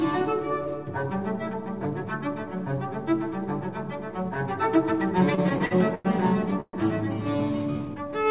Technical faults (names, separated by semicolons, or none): repeated stalls (stutter); call audio freeze